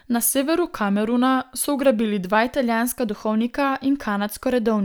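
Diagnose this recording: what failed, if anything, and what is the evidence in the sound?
From 0.30 s to 2.35 s the speech drops about 96 cents, nearly a semitone, and runs 5.4% slow, then snaps back. This is likely a drift correction step at the buffer stage, where clock-matching resampling jumped in rate. Unlike wow or gradual drift, the change starts and ends abruptly.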